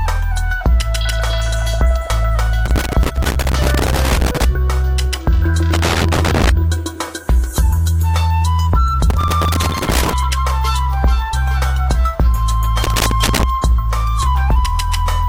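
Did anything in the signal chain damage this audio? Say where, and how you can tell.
Yes. The damage is in the analogue wiring, as loose connector crackle. Four irregular bursts of crackle and scratching break into the sound, from 2.66 to 4.45 s, 5.73 to 6.49 s, 9.10 to 10.13 s and 12.83 to 13.43 s. A worn or dirty contact keeps making and breaking as the plug shifts. Each break chops the signal, and any DC on the line turns the breaks into pops. The uneven spacing and lengths fit physical movement, not a digital fault.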